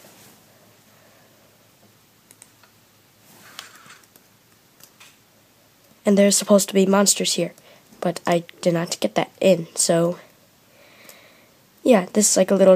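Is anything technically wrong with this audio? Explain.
No, nothing technically wrong can be heard here.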